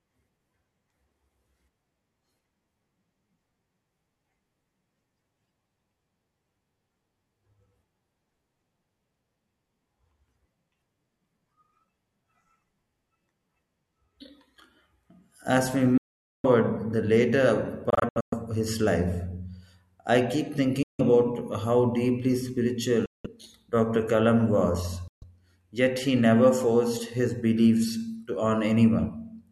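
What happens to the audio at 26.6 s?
At 26.6 s the speech carries on without interruption, with no dropout, click, distortion or other fault at that moment.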